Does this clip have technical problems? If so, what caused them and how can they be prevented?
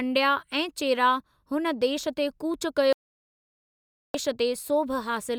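Yes. There's a digital broadcast dropout from 2.93 to 4.15 s, right after "हुन देश ते कूच": the receiver stopped getting clean frames and muted, so about 1.2 s of speech is simply gone before the audio picks back up. Better signal strength or antenna placement at the receiver would prevent it.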